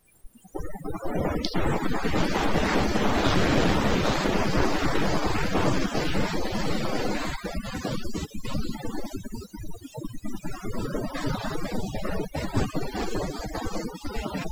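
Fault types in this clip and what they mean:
Overdone noise removal: the noise reduction was pushed way too hard on a noisy recording, so any frequency band sitting close to the tool's idea of the noise gets squashed or switched off, and the softer parts of the speech get caught too. Across the whole clip you hear the background drop away and break up into little twinkling, warbling specks.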